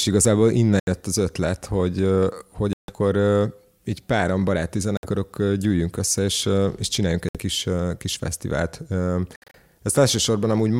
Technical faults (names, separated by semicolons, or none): Bluetooth dropout